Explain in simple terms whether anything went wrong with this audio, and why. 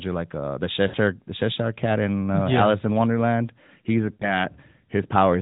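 Lost AMR speech frames at 0.88 to 0.97 s and 4.14 to 4.34 s: each time, about 60 ms of the phone-quality speech is missing, consistent with three dropped frames. The decoder stretched the last good sound with falling volume, giving a brief smeared fade before the speech recovers.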